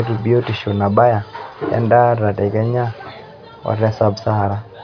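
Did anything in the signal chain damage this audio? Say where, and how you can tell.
No, nothing damaged it.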